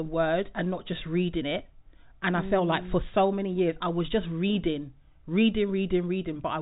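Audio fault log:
No faults heard; telephone-band speech, nothing above 3.8 kHz.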